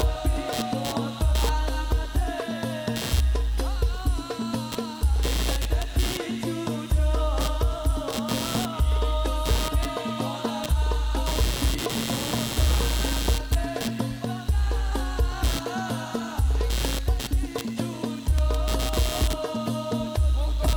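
From start to finish there is computer activity noise: a buzzing, chirping layer that sits roughly 10 dB below the program material, with a pulse rate of around 150 per second. It rises and falls independently of the audio itself. The cause is the host machine's changing load, such as processor, graphics or mouse activity, pulling current through a ground shared with the audio circuitry and modulating its reference.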